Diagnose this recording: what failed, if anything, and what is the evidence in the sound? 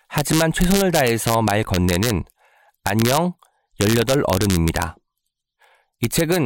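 Integer overflow at the sample-format conversion stage: on the loudest speech peaks throughout, a small fraction of samples wrap from full positive to full negative rather than being held at the limit. Clipping would flatten those peaks into dull buzz, but here they produce sharp, violent cracks.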